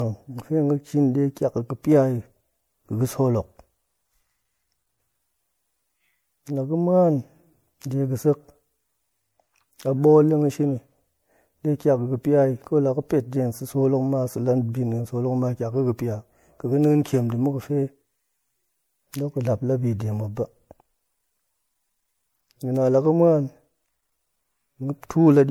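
Generation loss runs throughout: the speech sounds swirly, smeared and hollow, with blurred consonant attacks. It is likely from roughly three rounds of MP3 re-encoding at around 96 kbit/s, each pass requantising on a shifted frame grid so noise and spectral gaps pile up.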